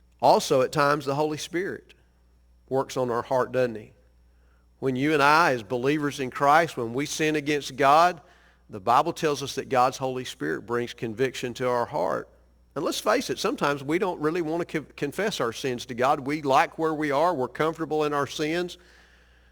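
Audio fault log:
throughout, crude rate conversion: samples repeated unfiltered, fitting 44.1 to 48 kHz; inharmonic fizz about 25 dB down, seen as aliased spectrogram lines under speech.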